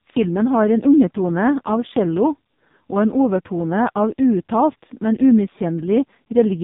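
Throughout the speech, the AMR narrowband mobile codec is running at a very low rate, which fits AMR-NB's 5.15 kbps mode. Too few excitation pulses drive its vocal-tract model, so the voice sounds heavily buzzy and synthetic, with nothing above 3.8 kHz.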